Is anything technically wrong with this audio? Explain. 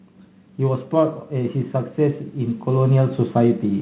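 Yes. From 0.57 s to the end, the speech and the background noise under it swell together, getting steadily louder over a few seconds instead of jumping in a single step. This is automatic gain rising. The gain control judged the incoming level too low and kept pushing its gain upward. Because it amplifies the whole signal, the room noise climbs with the speech. The audio also stops at 4 kHz, which fits the narrowband G.711 call path it travelled through.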